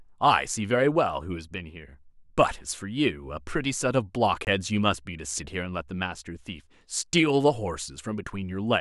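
A block of digital silence runs from 4.45 to 4.47 s, a 21 ms hole in the speech that fits a 1024-sample buffer left unfilled in time. The signal drops straight to silence and back with no fade, heard as a short hole.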